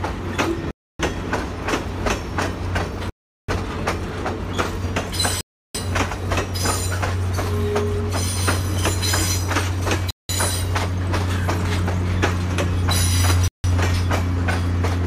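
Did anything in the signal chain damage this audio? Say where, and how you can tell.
Yes: five short dropouts to silence, at 0.71, 3.10, 5.41, 10.11 and 13.48 s (0.16 to 0.39 s long), a likely Bluetooth stall from buffer underrun during wireless retransmission.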